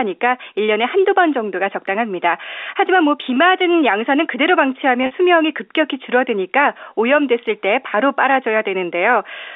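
Between 5.03 and 5.11 s packets were lost, about 60 ms spread over 80 ms, the longest gap 50 ms. This is packet loss with pitch repetition: the receiver looped the last pitch period, so the speech briefly sticks on a buzzy, held tone within the narrow G.711 telephone band.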